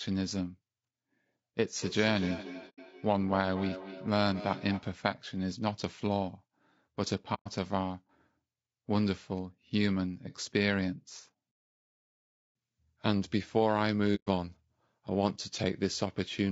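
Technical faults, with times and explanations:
Throughout: low-delay AAC compression, plainly audible; the speech sounds rough and grainy with noise between harmonics, likely AAC-ELD at a low bitrate around 32 kbps.
1.81 to 4.92 s: feedback echo between two devices; the speech comes back roughly every fifth of a second, peaking about 13 dB under the talker, as a second device replays it into the mic.
2.69 to 2.79 s, 7.34 to 7.48 s, 14.15 to 14.28 s: AAC frame loss with muting; soft-edged holes of 90, 120 and 120 ms, where dropped frames were zeroed and the overlapping windows fade out and back in.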